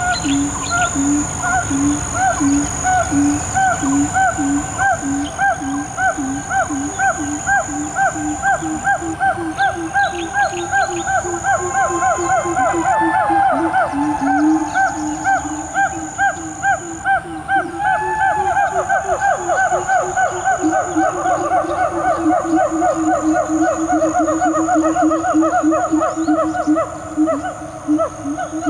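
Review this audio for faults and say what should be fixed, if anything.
Gain pumping runs through the whole clip. The gain swings around 10 dB. Loud and soft parts sit unnaturally close in level. The likely cause is input gain set far too high, with a fast limiter clamping down on each peak. Lower the microphone gain at the source so the limiter rarely engages.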